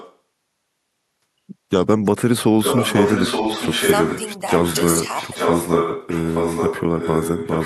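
Echo leak at 0.0 to 0.16 s, 2.59 to 4.22 s and 4.52 to 7.65 s in this speech clip: a copy trailing by 0.87 s returns, faint at first, then as loud as the voice, then slightly quieter, likely loudspeaker sound that an echo canceller failed to remove.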